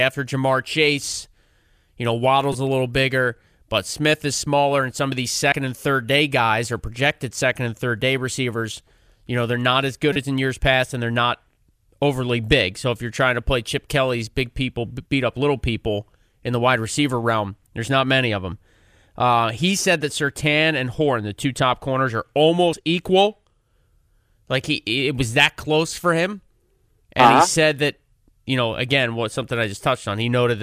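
Short chirps and blips break into the speech at 2.53 to 2.55 s just before "a little bigger but", at 5.52 s, at 10.13 to 10.16 s between "they're not as good" and "as in years past", at 15.06 s, and at 22.74 s after "two top corners are". This is damaged data in a compressed stream: corrupted bytes made the decoder misread frames, lose sync and jump to the next header.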